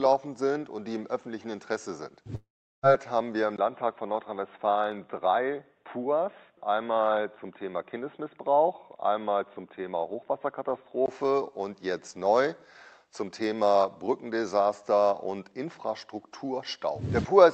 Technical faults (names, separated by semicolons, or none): long network dropout; input switched to a poorer device